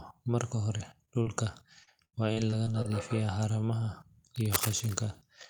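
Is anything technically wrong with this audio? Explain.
Yes. There are three kinds of fault in this speech clip.

Short concealed packet loss occurs three times, at 0.77–0.81 s, 1.05–1.09 s and 1.23–1.27 s. Each time about 20 ms of the stream failed to reach the decoder in time. The receiver bridged the hole by extending the preceding sound for roughly 15 to 26 ms and then cross-fading back into the real signal. Each one is heard as a brief smear or wobble, and a short consonant at that spot can drop out.

Repeated packet loss (robotic sound) runs from 1.83 to 2.86 s. Here the stream broke up again and again, leaving six separate holes totalling about 220 ms, the longest about 78 ms. Each hole was patched by continuing the last sound, and the next hole arrived before the audio could settle, so roughly a fifth of this stretch is synthetic fill. The speech turns choppy, with fragments missing.

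Cable scratch noise appears from 4.36 to 4.95 s. The likely cause is a worn cable, connector or control being moved, so its contact resistance fluctuates rapidly and injects irregular bursts of noise into the signal. The bursts sit at about 5 dB below the speech, nearly as loud as the speech itself, and are heard as a rough scratching or rustling laid over it for about half a second.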